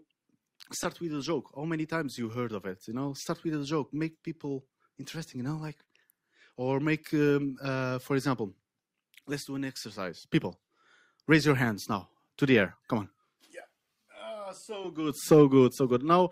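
Clock drift between sender and receiver runs through the whole clip, with the sender's clock roughly one percent slow, so the receiver's buffer keeps draining rather than swinging unpredictably as it would with network jitter.

From 1.59 to 15.55 s, repeated timing corrections stretch the audio to 99% speed, inserting around 150 ms in total. These are small, unevenly spaced hiccups, always lengthening, never cutting.

At 5.85 to 5.89 s, a short stall from a late packet holds the current sound for 21 ms. Nothing is lost, unlike a dropout, which leaves a gap.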